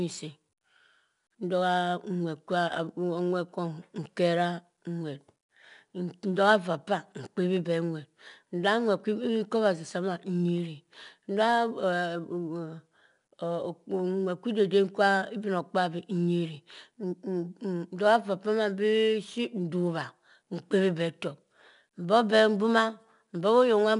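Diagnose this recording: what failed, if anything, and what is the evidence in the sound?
The codec stage failed: 4-bit ADPCM compression runs through the whole speech clip. Each sample is coded as a coarse step from a prediction, so gritty hiss rides every loud syllable and sharp onsets distort. Nothing sounds above 10.7 kHz, which fits a stream near 89 kbps.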